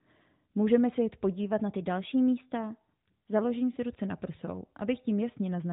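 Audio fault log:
1.52–3.39 s, drift correction step: the speech suddenly plays 6.09% faster and 102 cents sharp, about a semitone, then snaps back to normal at 3.39 s. That's likely a clock-sync stage changing playback rate in one jump to rebalance its buffer.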